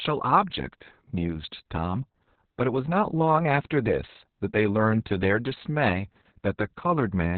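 From start to finish the speech sounds muffled, hoarse and faintly robotic, with nothing above 4.3 kHz. This is heavy Opus voice compression. The SILK coder has narrowed the band and coded the excitation coarsely, which fits a bitrate near 6 kbps.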